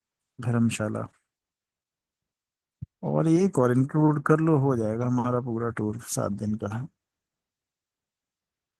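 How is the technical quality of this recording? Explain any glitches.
The recording has one fault, Opus voice compression, heard throughout the speech. The hybrid coder models the lower band by linear prediction with coarse excitation and adds a thin layer above 8 kHz, which fits roughly 16 kbps. The speech sounds plainly hoarse and slightly robotic rather than merely muffled, which sets it apart from simple low-pass filtering.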